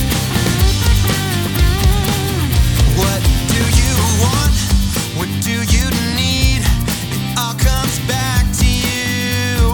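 No technical faults can be heard anywhere in the audio.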